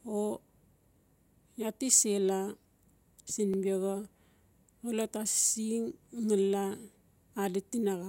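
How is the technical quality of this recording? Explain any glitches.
The recording has a regular stutter from overlapping chunks at 1.01, 3.54 and 6.06 s, about 2.5 s apart. At each join, the next chunk begins about 21 ms early, so that sliver of speech plays twice. The brief doubled click, rather than a silent gap, separates it from dropouts.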